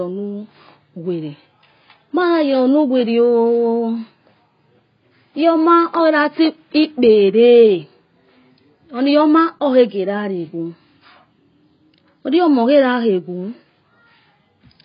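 AAC compression damage runs throughout this speech recording: nothing sounds above 5.1 kHz, and heavy smearing and warble point to likely low-bitrate AAC-LC, consistent with roughly 16 kbps.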